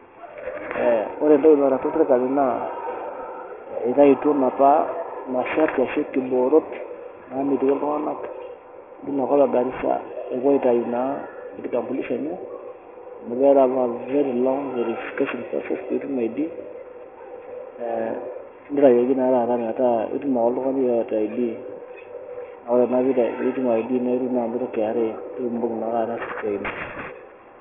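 Speech with aliasing throughout: the sound stops abruptly at 3 kHz, pointing to a drop to a 6 kHz rate without filtering, so sibilant energy folds back as gritty, unrelated tones about 20 dB down. Plain band-limiting would only muffle it, not add metallic hash.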